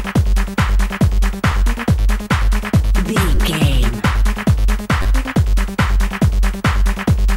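Audio arrived late three times, so the device replayed its last buffer. This repeated buffer fault causes brief hard-edged stutters at 1.52 s, 3.35–3.37 s and 5.02–5.06 s, with 10.7 ms repeats that fit a 512-sample buffer.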